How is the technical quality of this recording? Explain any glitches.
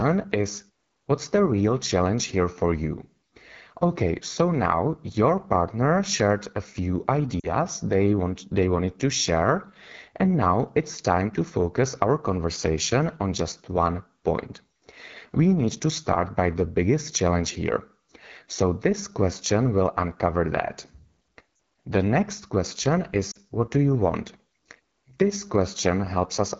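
Technical quality is limited: the speech is carried by a low-rate wideband phone codec throughout, and three short dropouts occur where speech frames were lost.

The AMR wideband (HD Voice) codec is running at 8.85 kbit/s, the second-lowest rate it offers. At that rate the model of the vocal tract and its pulse excitation is coded too coarsely, so every passage sounds rough and raspy. The band above 6.4 kHz is filled with shaped noise rather than real detail.

Lost AMR speech frames occur three times, each a two-frame gap of 40 ms. The first is at 7.40 s, just after "partner shared a few", the second at 21.55 s, and the third at 23.31 s, between "next question" and "what do you want". Radio errors corrupted those frames, so the decoder filled them by repeating the last good pitch and vocal tract settings at falling gain. Each gap sounds like a quick fade to near silence, and the speech returns weak or rough for a moment. 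Silence in the pauses fades in and out cleanly, with the background dropping away there.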